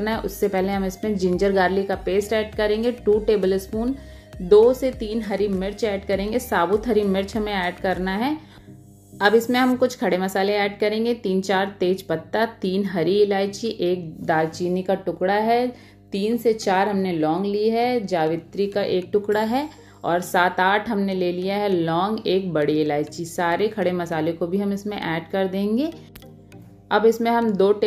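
Mains hum runs under the whole recording, from start to finish. It sits at 50 Hz, the frequency of a European-style power line. It is a steady low tone that never changes pitch or drops out. The level is roughly 30 dB below the wanted signal. The hum points to a ground loop or to a transformer near the signal path. Either one lets the power line couple into the audio and add its own tone.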